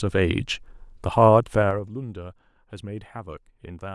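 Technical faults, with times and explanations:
1.54–1.96 s, zipper noise: a fast ticking rides on the speech as the level falls about 15 dB in unsmoothed 3 dB steps, roughly ten per second.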